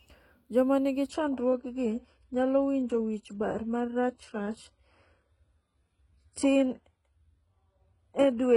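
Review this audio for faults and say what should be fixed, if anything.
At 1.09 s the speech quality drops suddenly, with no gap, and stays low to the end. This is an adaptive stream at a lower bitrate. Treble turns thin and synthetic, with nothing above 11 kHz. That fits a switch to a low-bitrate HE-AAC stream. To prevent it, deliver from a stable connection or pin the stream to its highest bitrate.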